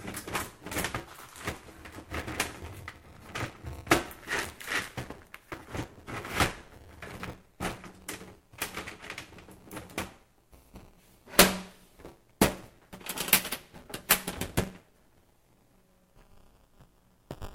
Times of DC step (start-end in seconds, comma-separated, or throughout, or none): none